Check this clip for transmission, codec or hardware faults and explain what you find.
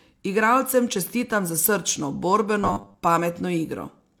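There's one fault. From 2.61 to 2.98 s you get robotic sound from repeated short buffers: a rigid 100 Hz buzz, likely from a roughly 10 ms chunk being replayed while most of the real speech there is skipped.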